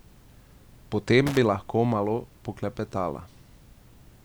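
From 1.27 to 1.37 s, just before "bi lahko malo poklepetala", loose connector crackle: a worn contact chops the signal in an irregular scratchy burst, unlike evenly spaced digital clicks.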